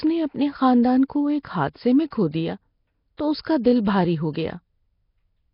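Throughout, the speech sounds rough and hissy, with a smeared, underwater quality and nothing above 5.3 kHz. The likely cause is heavy Nellymoser compression, perhaps around 22 kbps.

At 2.10 s, between "کو ایک حادثے میں" and "کھو دیا", a 17 ms pre-echo appears. Block-spread coding noise hisses just before a sharp attack and softens it.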